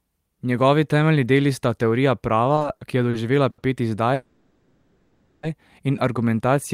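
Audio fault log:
2.55–3.60 s, repeated stalls (stutter): packets kept arriving late, so the jitter buffer emptied five times and the receiver stretched the last sound to cover about 180 ms, the longest gap 80 ms. Nothing is lost, but roughly a sixth of this stretch stutters and drags.
4.14–5.45 s, call audio freeze: the sound hangs for about 1.3 s as a stretched buzz that fades but never drops to full silence, then resumes where it stopped. This was likely a long hold-up of packets, adding 1.29 s of delay without losing anything.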